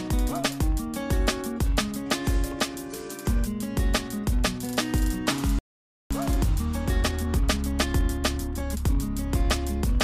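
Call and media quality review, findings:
Playback stall, 5.59 to 6.11 s: output drops to silence for about 0.52 s mid-flow, then resumes. Likely player buffer underrun or blocked audio thread.

Time-compressed catch-up, 6.11 to 9.11 s: audio hurried to 1.1x at unchanged pitch. Player trimming post-stall backlog by cutting and cross-fading short segments.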